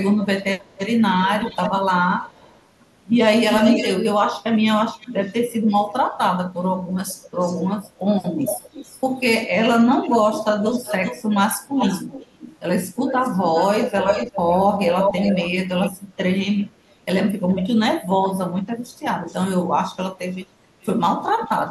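Echo leak runs from 0.23 to 17.68 s: a delayed copy of the speech trails it by 361 ms, strong, only around 5 dB below the original. A brief scrap returns at 19.27 to 19.36 s, faint and about 423 ms late, then again from 20.32 to 21.65 s at about 433 ms, moderately quiet. The likely cause is a loudspeaker at the far end whose echo canceller let its microphone pickup through and sent it back.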